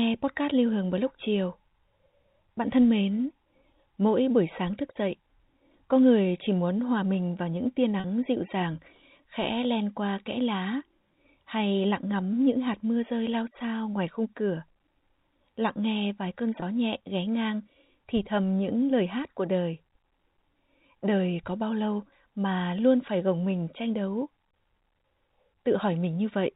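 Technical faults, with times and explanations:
8.00–8.04 s and 16.60–16.62 s, packet loss with pitch repetition: the sound drops out for 40 ms and then 20 ms, which fits two packets and then one packet of 20 ms each. Rather than leaving a hole, the receiver loops the last pitch period to cover the gap, so each spot comes across as a brief held, buzzy tone. Both gaps are shorter than the roughly 50 ms fade-out, so they never reach silence. That buzz sits within the telephone band of the G.711 coding, which passes nothing above 4 kHz.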